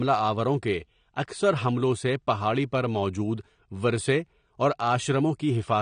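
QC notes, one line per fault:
Throughout, AAC compression: the speech sounds dull and smeared, with nothing above 9.7 kHz and a warbly, fizzy edge on sibilants. That's likely AAC-LC squeezed to a low rate, which fits around 32 kbps, dropping the top end and thinning bands.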